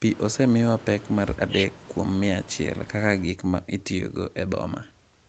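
A speech clip with clock drift between sender and receiver. The sending side's clock runs fast, by roughly 4 percent. Audio arrives quicker than the receiver plays it out. Its jitter buffer keeps filling. The receiver has to shed material to keep up. That is the root of the trouble here. The drift lasts the whole clip. It is not a single glitch but a steady mismatch in timing.

Repeated timing corrections follow from it. They run from 0.01 s to 5.13 s. The receiver trims short pieces again and again, all in the same direction. The net effect is playback at about 104 percent speed. The cuts are small and unevenly spaced. They come across, if at all, as slight hiccups or an unsteady tempo. No single edit stands out. The band stops at 8 kHz, which points to a wideband call codec.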